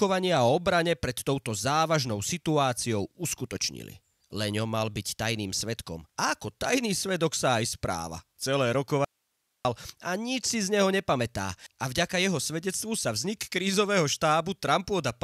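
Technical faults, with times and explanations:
9.05–9.65 s, audio dropout to a faint residue: speech cuts abruptly to faint hiss for about 0.6 s, likely lost upstream while the path stayed live, unlike a pause or fade.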